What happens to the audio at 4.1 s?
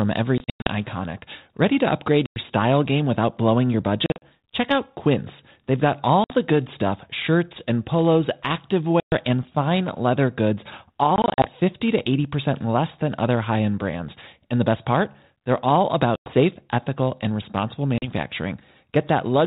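Packet loss on an ADPCM call hits from 4.06 to 4.22 s. About 120 ms of audio drops out, scattered over 160 ms, with the longest run at 40 ms. That suggests around seven lost packets. Each gap is filled with silence, so the holes have hard edges. The decoder's adaptive predictor and step size then no longer match the sender's. The speech comes back distorted until they resync. The G.726 coding at 32 kbit/s carries through this stretch.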